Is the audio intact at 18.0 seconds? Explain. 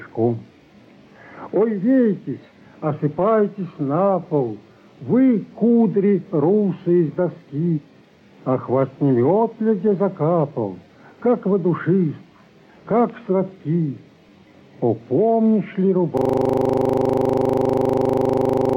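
No. A system hang loop runs from 16.17 s to the end. The system froze while one 40 ms slice replayed 65 times, at 25 Hz.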